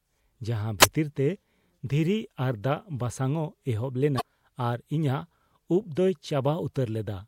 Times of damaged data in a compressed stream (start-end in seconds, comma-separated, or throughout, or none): 4.17-4.21